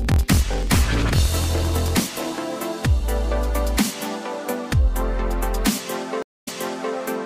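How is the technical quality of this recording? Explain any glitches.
The recording has two distinct glitches, one at the start and one near the end.

Block size mismatch (truncated), 0.0 to 2.39 s: one stage writes blocks longer than the next reads, and each block's tail is discarded. This produces a 43.1 Hz buzz, which fits a 1024-sample read block, while the audio runs 1.12 times fast at roughly normal pitch.

Stream reconnect, 6.22 to 6.94 s: the connection dropped and a fresh decoder restarted mid-stream. There is 242 ms of silence, then the audio resumes 470 ms earlier than where it stopped, repeating a short stretch, with the first frame fading in.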